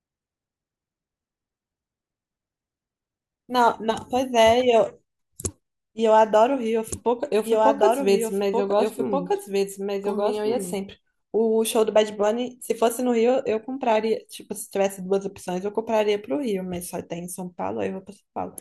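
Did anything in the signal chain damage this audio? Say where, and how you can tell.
Yes: a doubled audio track runs from 6.87 to 10.75 s. A second, full-band copy of the speech trails about one and a half seconds behind, about 5 dB quieter, with no decay or room colour, and starts and stops abruptly. That likely points to a slower second capture path or an editing stage holding two offset copies.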